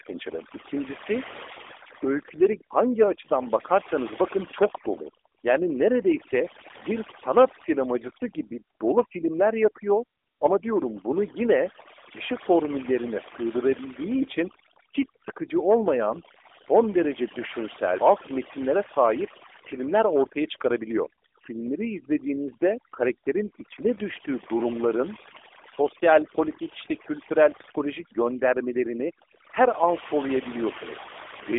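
Throughout the speech, overdone noise removal suppresses frequency bands near the noise floor, leaving near-silent gaps with twinkling specks. An AMR narrowband mobile codec also runs the whole length, confining the sound to roughly 300 Hz to 3.6 kHz with nothing above 3.7 kHz. Its buzzy, synthetic coding points to a low bitrate near 8 kbps.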